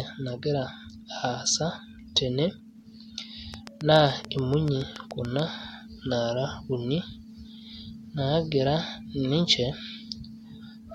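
Something in the chain, likely electrical interference from nearby equipment, injects a train of clicks from 3.54 to 5.40 s: about fifteen similar pulses at a regular 7 per second, peaking about 10 dB above the speech, heard as steady ticking through words and pauses alike.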